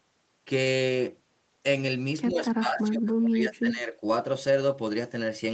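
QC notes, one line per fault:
2.3–3.95 s, speech suppressed in double talk: the speech dips, sinking by about 25 dB at its deepest, with around one and a half seconds affected in all. The likely cause is an echo canceller that, with both ends talking at once, could not separate this talker from the returning loudspeaker echo and attenuated both together. The dips come on top of the 8 kHz band limit of the Opus call path.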